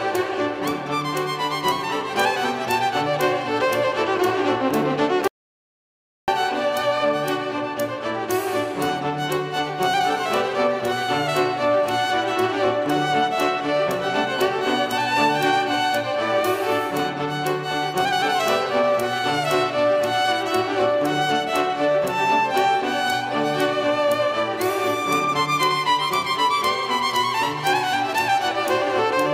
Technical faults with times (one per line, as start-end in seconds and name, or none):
5.28-6.28 audio dropout to silence